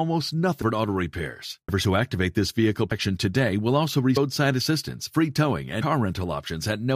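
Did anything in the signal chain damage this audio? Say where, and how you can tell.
Yes. At the codec stage, compressed frames were skipped: whole frames never reached the output, so the speech jumps forward at 0.61, 1.67, 2.90, 4.16 and 5.81 s, just before "auto repairs", "who activate this vehicle" and "today will also". Each jump loses a multiple of the 23.2 ms frame, about half a second at 0.61 and 4.16 s and roughly 150 to 200 ms elsewhere.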